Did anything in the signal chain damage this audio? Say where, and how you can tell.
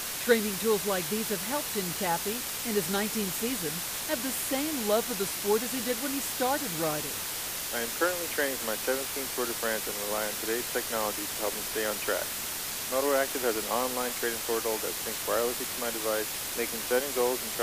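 Yes, at a sample-format conversion. A low bit depth with dither runs the whole way through, with a steady, even hiss sitting at roughly the same level as the sound itself. Squeezing samples to about 4 bits with dither turns the rounding error into that constant white noise instead of distortion.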